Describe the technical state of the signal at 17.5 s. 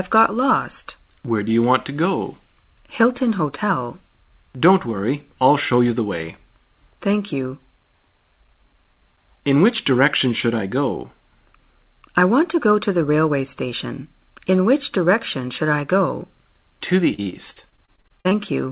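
Packets kept going missing between 17.14 and 18.33 s, each gap of up to 41 ms patched by stretching the previous sound. This repeated packet loss leaves choppy audio with pieces missing.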